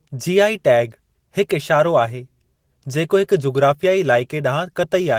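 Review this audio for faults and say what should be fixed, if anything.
No faults found; nothing needs fixing.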